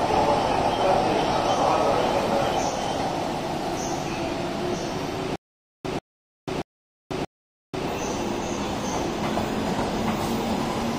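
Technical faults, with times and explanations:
5.36 to 7.88 s, stutter with silent gaps: a short burst of about 140 ms keeps coming back, four times in all, with roughly 490 ms of dead digital silence after each, so it pulses every 630 ms. Likely the stream stalled and replayed its last fragment at each retry, and whatever should have played there is gone.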